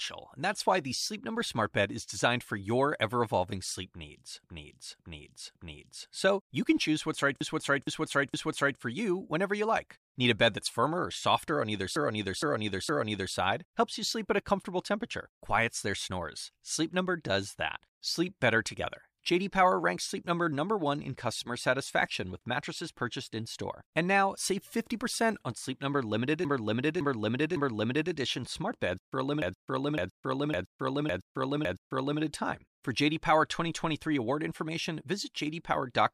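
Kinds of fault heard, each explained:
Repeated frames: A run of compressed frames is decoded more than once, so the sound stutters and runs longer. Five stretches loop between 4.44 and 32.21 s. Blocks of 464 or 557 ms replay three times, five times after "smart beds for a".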